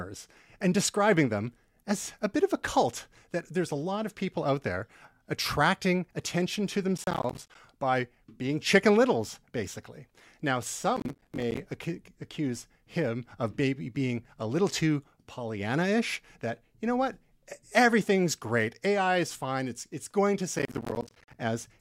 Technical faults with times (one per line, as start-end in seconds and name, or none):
6.98-7.55 processor overload crackle
10.97-11.59 processor overload crackle
20.59-21.34 processor overload crackle